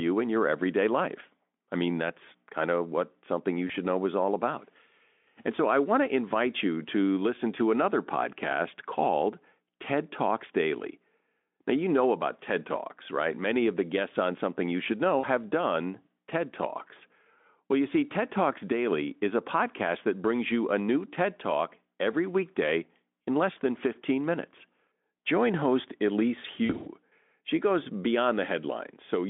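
Speech over a narrowband Speex link shows VoIP packet loss concealed by the speech codec at 3.67 to 3.72 s (between "of what something you" and "know is all about"), 15.19 to 15.26 s, and 26.65 to 26.88 s before "she goes", where several short drops scatter. The decoder extrapolates lost frames into buzzy or noisy, fading smears, visible as smeared harmonics and a sagging waveform envelope.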